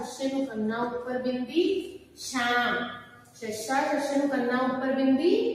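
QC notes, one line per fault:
Throughout: noise suppressor applied to music or sounds. A suppressor tuned for speech treats sustained tones, ambience and reverb as noise and turns them down, so gain swings by around 10 dB, attacks pass while held parts and tails sink, and the sound pumps and thins.
1.87–2.20 s and 2.98–3.43 s: sound cut by the noise suppressor. In each span the suppressor misreads steady or decaying material as noise and pulls it down, by about 11 dB and about 10 dB at the deepest, for roughly a third and half a second respectively.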